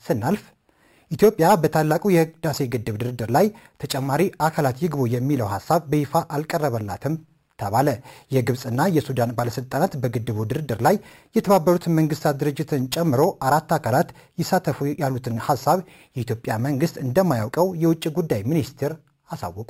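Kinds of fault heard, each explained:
Imaging from sample-and-hold upsampling: The sound was raised to a higher rate by repeating each sample, with no smoothing filter afterwards. The staircase this leaves creates mirror copies of the spectrum. Here the lowest copy fills the 6 kHz to 12 kHz band, which fits an original rate of 12 kHz raised to 48 kHz. It sits about 21 dB below the sound. It is heard throughout as a bright metallic fizz that rises and falls with the sound.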